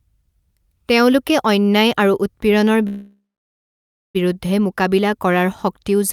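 At 2.87 s the speech halts in a call audio freeze: the last sound is stretched into a fading buzz, then about 0.94 s of silence, until 4.17 s. Delayed packets likely emptied the jitter buffer. Nothing is lost, and the speech resumes at "বিৰুদ্ধে মোকাবিলা কৰাৰ শক্তিও", 1.27 s late.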